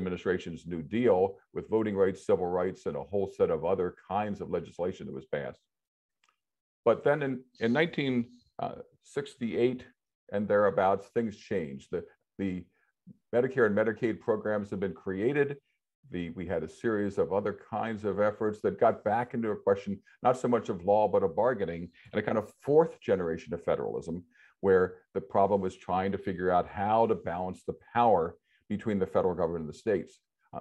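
No technical faults can be heard at any point in the audio.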